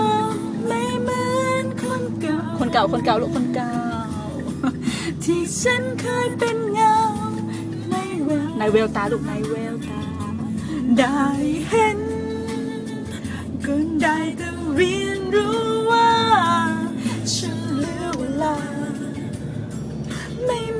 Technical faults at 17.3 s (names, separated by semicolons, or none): none